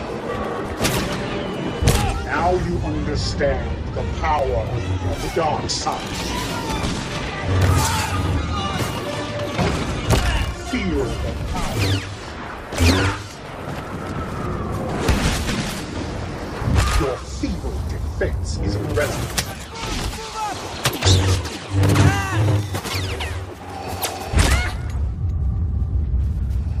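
Sharp single clicks land at 0.45 s, 4.39 s and 13.13 s. Each is a brief break in the waveform where the trace leaps abruptly from one level to another. The likely cause is dropped samples, with about 0.7 ms of the stream missing each time. That is far too little to remove any audible sound, but the step is enough to click. On a spectrogram every event shows as a thin vertical line spanning the full frequency range.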